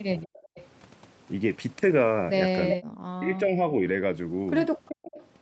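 A speech clip with two kinds of call fault. The first is an echo leak. A faint delayed copy of the speech trails it by about 385 ms, at 0.23 to 0.64 s, roughly 25 dB below the speech. It returns at 2.69 to 2.76 s, much louder, only about 5 dB down. Then at 4.86 to 5.28 s it sits about 15 dB down. The likely cause is a far-end loudspeaker whose echo canceller let part of the signal back. The second fault is speech suppressed in double talk. From 2.74 to 3.0 s the speech drops sharply, by around 40 dB, right as the loud echo arrives. From 3.19 to 3.62 s it dips again, more gently, by about 5 dB. Each of these covers about 300 ms. This likely comes from the canceller mistaking the talker for echo and turning both down. The band stops at 8 kHz, which fits an Opus call path.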